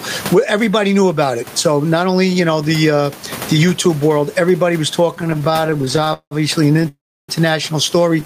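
Throughout the recording, the input gain appears to be set far too high, so a fast limiter keeps clamping down on the louder syllables. The result is gain pumping. The room noise sits about 30 dB below the speech, and the gain swings by around 20 dB, leaving the speech squashed and flat in dynamics.

From 5.15 to 6.33 s, just after "world everybody was", packets arrived late or too slowly and the jitter buffer kept running dry. The receiver repeatedly stretched the last sound to cover the gaps, producing repeated stalls (stutter). Dozens of brief holds fill about 41% of that stretch, the longest 178 ms, so the speech drags and judders without losing anything.

A shorter burst of the same stutter follows from 6.73 to 6.88 s. It consists of a few tiny holds of at most 13 ms each, concealing about a third of that span and giving a brief rough flutter.

It runs straight into a call audio freeze from 6.88 to 7.31 s, most likely a longer hold-up of packets in transit. 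The receiver continues the last sound for a moment, and it then fades to about 320 ms of silence. The speech resumes where it stopped, so roughly 0.4 s of delay has been inserted, with nothing missing.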